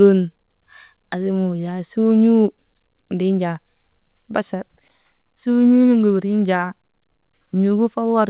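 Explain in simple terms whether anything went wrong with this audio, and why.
Nothing went wrong with this audio: it is speech that came through a phone-style call connection working as it should, which is why it sounds narrow, with nothing above 4 kHz.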